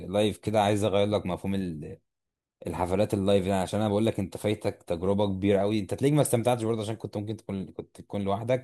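Nothing goes wrong anywhere in this bit of speech; there's simply no technical fault to point to, from the first moment to the last.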